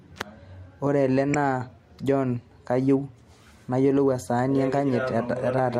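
At 1.34 s the speech is interrupted by a brief chirp, squeak, blip or burst of noise, the signature of a corrupt frame decoded. Bits inside the compressed data were flipped, and the decoder played the damaged frames instead of concealing them. Misread codes and wrong gain values placed energy at frequencies unrelated to the surrounding speech. The disturbance is very short, lasting only a few milliseconds, which points to a handful of damaged frames.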